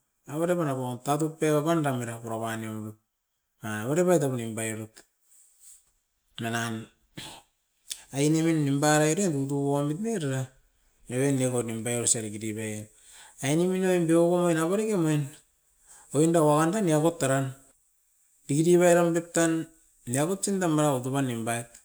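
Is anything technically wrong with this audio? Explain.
No, there is nothing technically wrong with this speech recording that a careful listen can detect.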